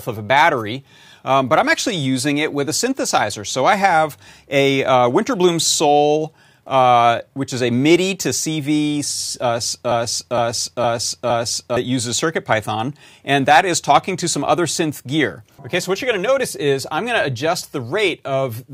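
A broken-record loop runs from 9.91 to 11.77 s: a 0.46 s fragment repeats four times, likely from a stalled stream resending its last buffer, and the intervening speech is lost.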